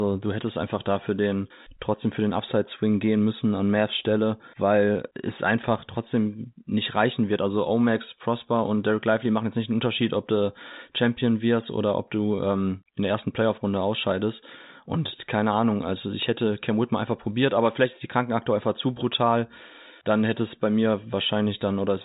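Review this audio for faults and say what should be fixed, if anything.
Nothing in the recording needs fixing. The speech has gone through G.711 telephone coding, so nothing above about 3.8 kHz reaches the ear, which is simply how that narrowband format is meant to sound.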